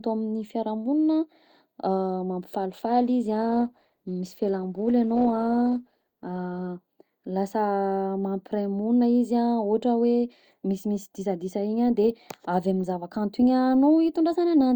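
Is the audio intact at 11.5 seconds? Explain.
Yes, at 11.5 seconds the speech plays through intact, with no dropout, click, distortion or other fault to be heard at that moment.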